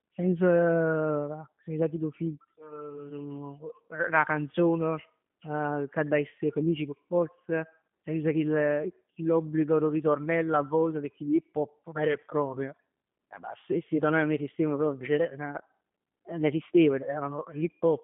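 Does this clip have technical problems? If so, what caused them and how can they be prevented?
Yes. The speech carries G.729 codec damage from start to finish. The sound is rebuilt from a vocal tract filter, a pitch predictor and a few coded pulses per 10 ms frame, which fits an 8 kbit/s G.729A link. That rebuilding makes it plainly rough and synthetic. The band runs from 150 Hz to 3.5 kHz, and nothing above 3.6 kHz survives, so it sounds narrow and muffled. To prevent this, route the call over a wideband codec such as G.722 or Opus instead of G.729.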